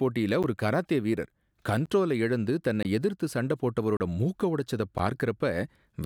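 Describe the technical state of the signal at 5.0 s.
Just before 5.0 s, at 4.98 s, the speech drops into a block of digital silence lasting about 10.7 ms, which fits a 512-sample buffer that was not filled in time. The waveform drops straight to silence and back with no fade, so each edge is a hard discontinuity. At this length the gap is heard as a tick or dip rather than an audible hole in the speech.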